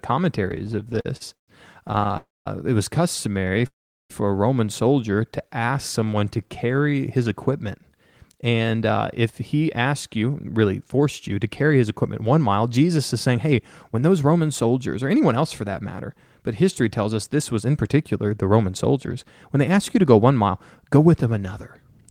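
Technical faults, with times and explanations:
0.51–1.50 s, repeated stalls (stutter): fifteen little hold-ups in under a second, the longest about 132 ms, with roughly a third of that stretch filled by stretched-out sound. Packets were arriving late, so the buffer kept running dry and the receiver kept extending the last sound. Nothing's lost, but it drags and stutters.
1.88–2.15 s, repeated stalls (stutter): seven quick catches of about 11 ms each, adding about 71 ms of filled sound. Same cause: the buffer emptied over and over and the receiver bridged each gap.
2.17–2.48 s, call audio freeze: the sound hangs and fades out, then goes quiet for about 200 ms before picking up where it left off, which pushes everything about 288 ms later. It's likely packets held up in transit emptying the jitter buffer, so a gap got inserted rather than anything dropped.
3.41–3.65 s, repeated stalls (stutter): five short hitches of about 11 ms each, about 49 ms filled in total, from the buffer repeatedly running out and the last sound being carried on to cover it.
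3.67–4.12 s, call audio freeze: another hang, longer this time, with the carried-on sound dying into about 390 ms of silence before resuming. That adds about 430 ms of delay while the receiver likely waits for delayed packets.
5.32–6.91 s, jitter buffer slow-down: the speech runs at about 91% speed with unchanged pitch, gaining about 150 ms. The receiver is rebuilding its reserve by repeating single pitch periods and bits of pauses, so sounds come out drawn-out.
8.33–16.45 s, jitter buffer speed-up: a long stretch at about 108% speed with the pitch unchanged, shedding something like 0.7 s overall. Too much audio had piled up in the buffer, so the receiver kept trimming tiny pitch-period slices, and it sounds a touch hurried.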